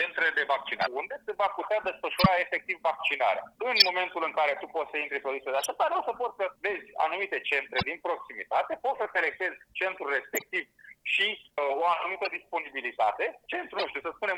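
Short chirps and noise bursts cut through the sound at 0.81–0.87, 2.17–2.26, 3.76–3.89, 5.59–5.66, 7.77–7.83, 10.34–10.51, 12.25–12.32 and 13.75–13.85 s. The loudest, near 2.2 and 3.8 s, peak at about −5 dBFS. Each is a corrupt frame decoded: bit errors in a run of compressed frames were played anyway, putting energy at the wrong frequencies.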